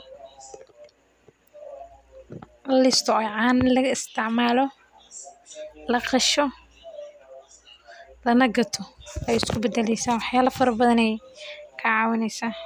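No technical faults are audible anywhere in this recording.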